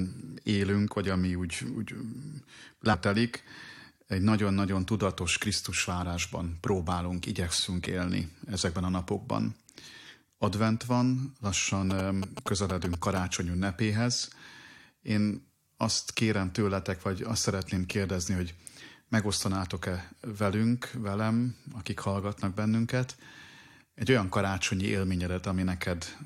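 At 2.93 s the speech jumps abruptly forward with a small blip, likely a stream segment skipped when one segment failed to load and playback resumed at the next. On a waveform this shows as a hard discontinuity; a spectrogram shows a thin vertical broadband line.

From 11.90 to 13.19 s, GSM signalling bursts from a nearby 2G phone are rectified by the audio circuitry, producing a galloping dit-dit-dit of short buzzes at a 217 Hz rate, only slightly quieter than the speech. A spectrogram shows stacked harmonic lines at multiples of 217 Hz in clustered blocks.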